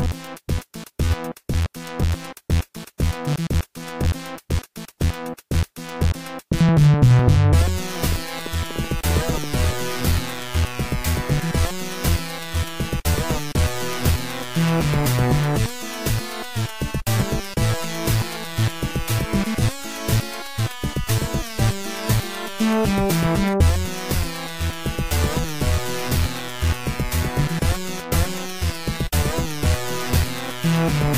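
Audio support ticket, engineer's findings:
Irregular ticking/popping over the sound, 7.61–9.74 s: train of clicks, around fifteen, about 6 per second, uneven spacing, peaks a few dB above programme level. Likely external interference or a faulty connection or power supply injecting repeated same-shaped pulses.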